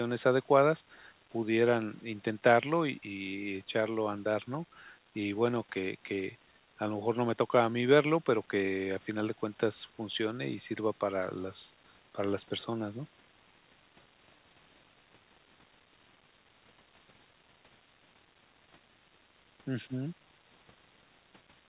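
Nothing stood out on listening to this speech recording.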